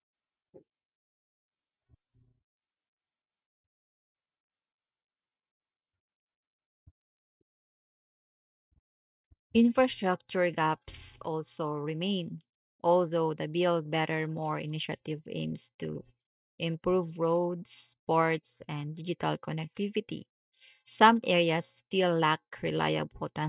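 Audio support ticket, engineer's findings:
Nothing stood out on listening to this speech recording.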